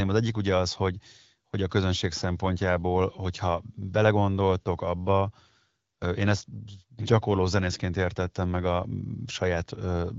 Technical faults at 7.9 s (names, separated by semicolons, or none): none